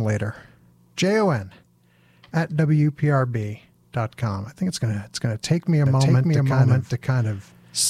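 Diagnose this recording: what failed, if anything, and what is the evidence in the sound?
Doubled audio track from 5.86 s, after "to take me a", to the end: an equally loud, dry copy trails by about half a second, likely a second, slower capture path being mixed in.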